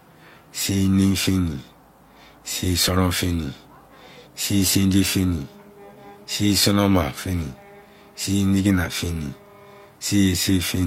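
At 2.88 s the speech jumps ahead through an overlap between stream segments: two pieces of the stream claimed the same stretch of time, and trimming that overlap removed about 34 ms of audio. It sounds like a small click or skip. The waveform shows an abrupt discontinuity there, and the spectrogram a thin vertical broadband line.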